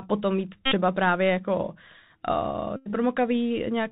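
From start to finish the speech carries the signature of the Bluetooth CVSD headset codec, consistent with 64 kbps CVSD. Nothing above 4 kHz gets through, sibilants turn scratchy, loud bright passages break up where the one-bit delta steps can't keep pace, and a granular hiss sits underneath.

From 0.66 to 0.75 s, and again from 2.76 to 2.90 s, a Bluetooth headset packet repeated fault takes over. Lost packets were replaced by re-decoding the previous packet's bits every 3.75 ms, producing a steady buzz near 267 Hz. About 60 ms and 94 ms of audio were lost, which fits runs of roughly 16 and 25 dropped packets.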